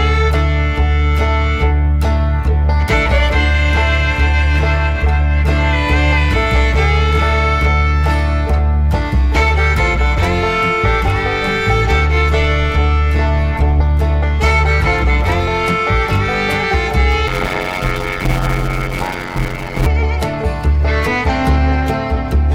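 From 17.27 to 19.86 s there is a block size mismatch (padded): each block written looks to be about 256 samples, zero-filled to a longer read block. This puts a gap in every block, giving a 91.9 Hz buzz, and the audio runs at 0.533 times normal speed with pitch roughly unchanged.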